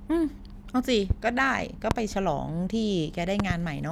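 Loud pops at 1.10 to 1.13 s and 1.91 to 1.94 s, then a double pop at 3.40 to 3.53 s, each about 15 to 20 dB above the speech, which continues underneath. The likely cause is a voltage spike from a switch or static discharge.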